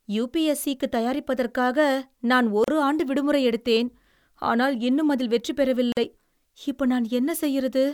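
Gaps at joins of encoded pieces interrupt this speech at 2.64 s and 5.92 s, silences of 35 ms and 46 ms with smeared edges. Separately encoded pieces were joined untrimmed, leaving encoder start delay and final-frame padding, before the speech resumes where it stopped.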